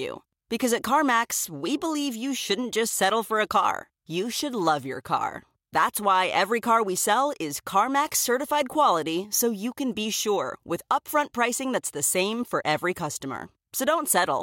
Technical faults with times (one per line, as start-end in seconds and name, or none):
none